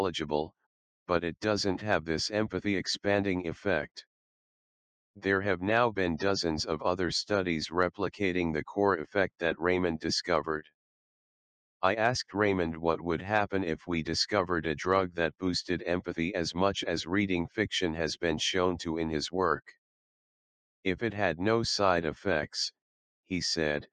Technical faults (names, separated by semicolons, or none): none